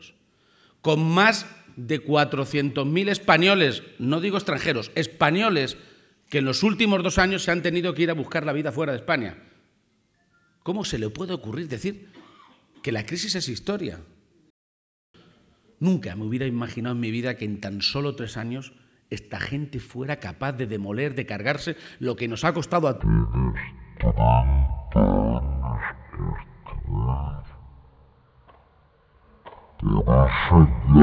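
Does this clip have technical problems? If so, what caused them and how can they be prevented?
Yes. A wrong sample rate affects the audio from 23.01 s to the end. There the sound plays at one third of its proper speed and drops by 19 semitones, with tempo and pitch falling together by the same ratio. That happens when samples are clocked out more slowly than they were captured, without any conversion. The ratio fits 48 kHz material being played back at 16 kHz. To prevent it, resample explicitly whenever the source and output rates differ, and check that the playback device's configured rate matches the stream's rate.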